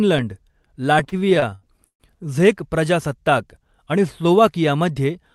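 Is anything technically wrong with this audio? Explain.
Yes. From 0.99 to 2.03 s, just before "झेक प्रजासत्ताक आणि", the speech shows repeated stalls (stutter). Packets arrived late, so the jitter buffer kept running dry, and the receiver stretched the last sound to cover each wait: twelve short holds, the longest 140 ms, filling about a third of that second. Unlike packet loss, nothing is skipped. The speech drags and hiccups, then resumes where it left off, all below the call codec's cut-off near 12 kHz.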